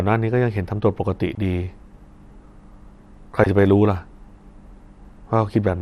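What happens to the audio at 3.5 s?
Between 3.44 and 3.50 s the speech breaks into DAB burbling, a burst of about 60 ms. Bit errors have slipped past the error correction into the MP2 audio data, so corrupted samples and scale factors throw individual sub-bands to wrong levels for a frame at a time. The span fits roughly four frames being hit, and it comes through as short blips of noise in single sub-bands laid over the speech, consistent with an error rate of a small fraction of a percent.

Around and underneath that burst, the whole clip carries plainly audible MP2 compression, likely from encoding at around 80 kbps. With that few bits, Layer II shuts off upper sub-bands and quantises the remaining ones coarsely, so bands flicker in and out. The speech sounds dull, with a granular, gurgling roughness that persists through 3.5 s and forms the background against which the burbling stands out.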